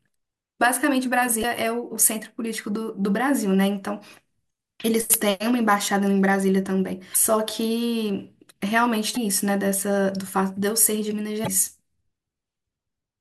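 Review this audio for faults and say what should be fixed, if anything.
Damaged data in the compressed stream causes five brief glitches, at 1.41–1.44, 4.81–4.85, 7.12–7.16, 9.13–9.17 and 11.44–11.48 s. At each one, corrupted frames make the decoder lose sync until it finds the next frame header. To prevent this, verify the file with checksums during transfer and storage, and re-fetch an intact copy of the speech recording rather than decoding the damaged one.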